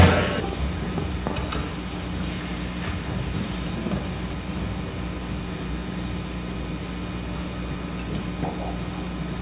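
The signal carries no audible technical faults at any point.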